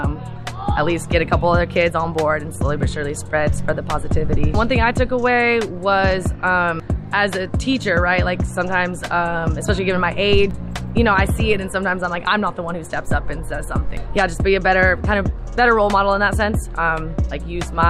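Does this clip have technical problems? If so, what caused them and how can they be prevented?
No, nothing stood out as a technical problem on listening, so there is no cause to trace and nothing to prevent.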